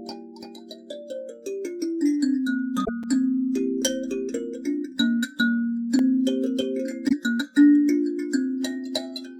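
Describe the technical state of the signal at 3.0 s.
At 3.03 s there is a block of digital silence lasting about 5 ms: a run of samples drops to silence with no fade, so the gap is heard as a brief tick or dip. This points to the output buffer not being filled in time.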